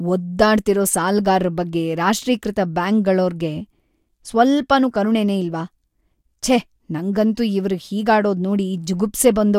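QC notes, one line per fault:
No faults heard.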